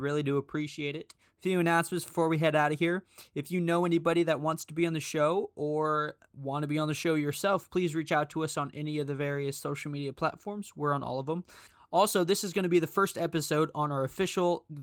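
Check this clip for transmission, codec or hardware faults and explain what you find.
No transmission, codec or hardware faults are present.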